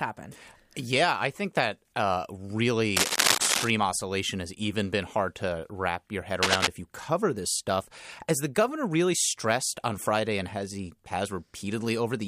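Cable scratch noise appears from 2.97 to 3.70 s, just before "oscillation has even been", and again from 6.42 to 6.67 s, between "to wrap your head" and "if you cover this". Each is a dense, ragged burst of scratching and rustling laid over the speech, a little louder than the speech itself. The likely cause is a worn cable, connector or control being moved, its contact resistance jumping rapidly and injecting that uneven noise.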